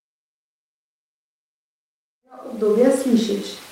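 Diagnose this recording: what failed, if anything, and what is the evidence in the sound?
Nothing failed at any stage: the only level change in this speech is a smooth fade-in from around 2 s that reaches full level at 3.08 s, with no click or hard edge.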